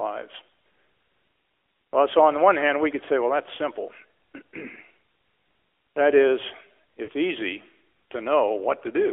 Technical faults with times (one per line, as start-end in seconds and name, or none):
0.00-9.12 AMR narrowband mobile codec
7.04-7.09 lost AMR speech frames